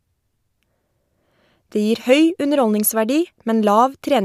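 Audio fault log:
Nothing stood out on listening to the speech in this clip.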